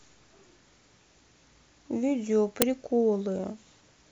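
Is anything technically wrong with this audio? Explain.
Yes. At 2.62 s there is a short, loud crack. This is an uninitialised buffer: 5.8 ms of leftover memory played as samples, which fits a 256-sample buffer.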